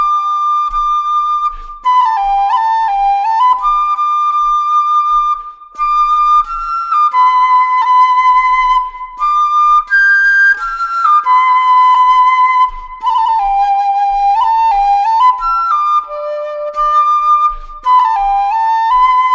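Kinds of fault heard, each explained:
No technical faults are audible.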